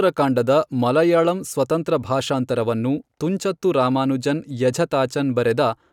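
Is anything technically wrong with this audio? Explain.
No, nothing is technically wrong with this audio.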